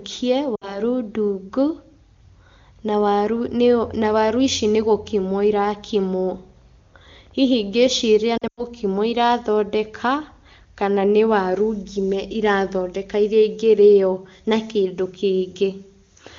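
At 0.55 to 0.80 s, lost AMR speech frames: about 60 ms fails its checksum and the decoder repeats stale parameters, giving a brief warbling dip. At 8.38 to 8.65 s, 140 ms scattered over 200 ms, with a 100 ms run, drops to near silence before speech recovers roughly.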